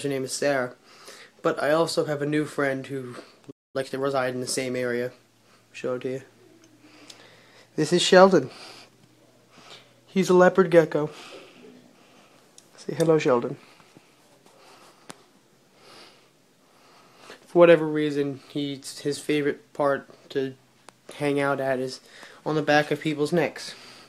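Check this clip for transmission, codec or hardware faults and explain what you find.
Two related faults occur together, a playback stall followed by time-compressed catch-up.

At 3.50 s the audio drops to silence until 3.76 s, a gap of about 234 ms. This is a playback stall. The player likely ran out of buffered data or was briefly blocked. The sound cuts off mid-flow, then resumes.

From 3.76 to 4.22 s the audio runs at 1.5 times normal speed. This is time-compressed catch-up. The player drains its backlog by removing short slices and cross-fading the joins. Pitch stays normal, but the sound is hurried.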